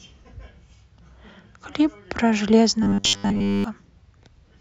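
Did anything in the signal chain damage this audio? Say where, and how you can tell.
Yes. Robotic sound from repeated short buffers runs from 2.83 to 3.64 s, where the speech hardens into a metallic 100 Hz buzz that loosely follows the words. That fixed pitch fits a 10 ms block replayed for most of the stretch, likely a driver buffer underrun.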